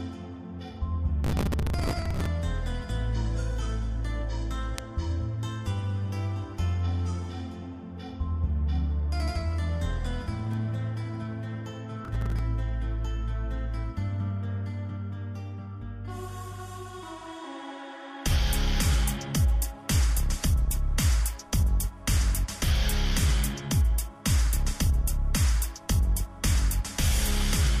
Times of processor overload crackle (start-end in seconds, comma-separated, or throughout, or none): 1.24-2.26, 12.05-12.40